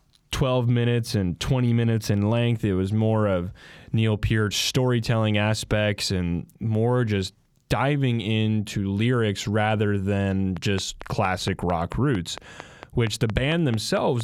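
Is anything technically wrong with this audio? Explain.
Yes. From 10.57 s to 14.22 s there's a train of clicks, around fifteen sharp, near-identical pops at a steady 4.4 per second, peaking roughly 10 dB above the speech. It's likely interference from nearby gear or a faulty connection or power supply, and the ticking carries right through the pauses.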